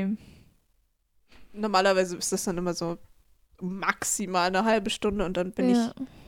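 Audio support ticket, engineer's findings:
Drift correction step, 4.73 s to end of clip, right after "maximal eine". Likely cause: clock-sync resampler jumping playback rate in one step to rebalance its buffer. Speech runs about 5.9% fast, pitch up nearly 100 cents, roughly a semitone, through to the end.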